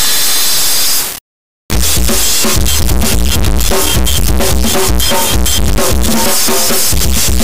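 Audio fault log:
throughout, integer read as float. An extremely loud, square-wave buzz fills the clip and drops to silence in the quietest moments. This fits 32-bit integer samples read as 32-bit float. The values land near zero or far past full scale, so output jumps between silence and clipping.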